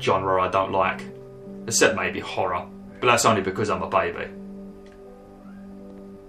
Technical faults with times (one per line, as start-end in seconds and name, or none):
none